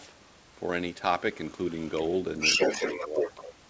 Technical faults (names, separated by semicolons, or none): other side's voice leaking through; speech suppressed in double talk